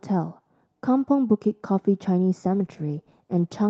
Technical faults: call bitrate drop

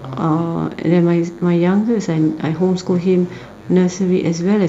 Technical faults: DECT cordless phone buzz

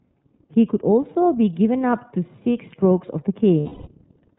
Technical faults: iLBC codec; lost iLBC frames

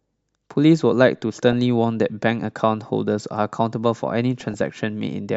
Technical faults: DAB burbling

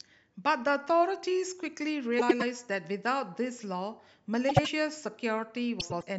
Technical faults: frames out of order

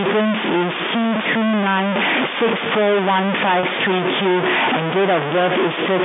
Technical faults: stuck bit; computer activity noise; packet loss with pitch repetition

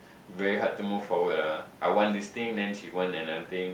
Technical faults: none

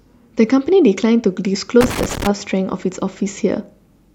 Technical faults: loose connector crackle

